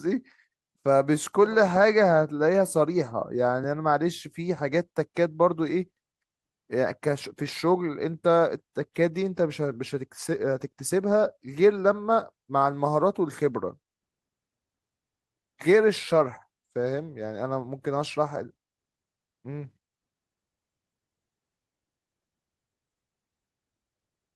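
Listening through the speech turned up nothing that stood out as a technical fault.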